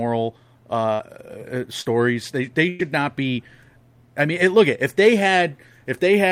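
Speech carried over a lossy packet link shows two bursts of packet loss and one short concealed packet loss. In each burst, several consecutive packets failed to arrive in time, so the receiver extended the last decoded sound and faded it before the stream resumed further on. From 0.93 to 1.01 s, about 57 ms is filled this way and 60 ms of audio is missing. From 2.69 to 2.81 s, roughly 100 ms is filled and lost just before "not be". A shorter dropout from 1.81 to 1.87 s was bridged by the decoder's concealment, which synthesised 40 ms from the preceding signal and cross-faded back into the real audio. It is heard as a brief smear or wobble rather than a gap.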